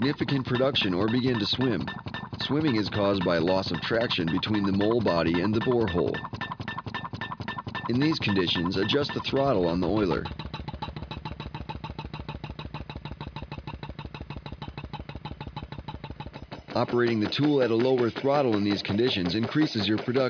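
No technical faults can be heard in this audio at any point.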